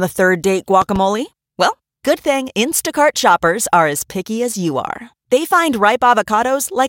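Between 0.82 and 0.98 s, a loud pop occurs twice over the continuing speech, peaking around 10 dB above it, likely from a sudden voltage step. The waveform shows two sharp spikes, and the spectrogram shows two thin vertical lines spanning all frequencies.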